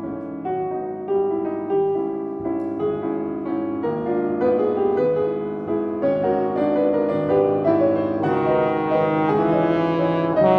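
Nothing here calls for comment, as there's no glitch, dropout or other technical fault to be heard anywhere in the clip.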